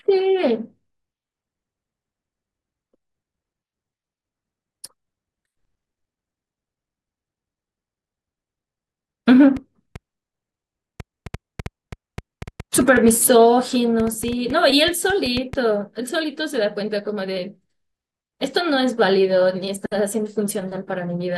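Likely interference or a faulty connection puts a train of clicks into this speech from 9.57 to 15.54 s: around thirty irregular pops, about 4.2 per second, peaking about 5 dB above the speech.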